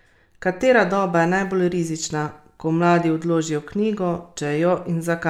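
No technical faults can be heard anywhere in this speech recording.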